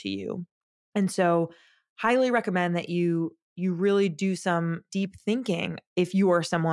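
No technical faults can be heard anywhere in the recording. Nothing in the audio stands out as a defect at any point.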